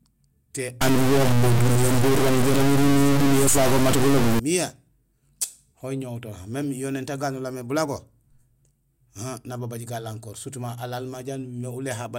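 A speech clip with a stretch of distortion from about 0.81 s to 4.39 s, and it sounds like a stuck bit. One bit of each sample seems pinned at a fixed value, so roughly half the samples get pushed off by that bit's weight in a pattern that tracks the waveform. That's the distortion on the speech, and it's why the quiet gaps in that stretch fill with hiss instead of going silent. A broken data line or a converter fault is the likely culprit.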